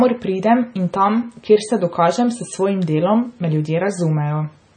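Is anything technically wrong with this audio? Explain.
Yes. Throughout, the speech has heavy MP3 compression damage: nothing above 9 kHz, plus watery, swirly artefacts where weak frequency lines flicker on and off, likely from a low bitrate around 25 kbps.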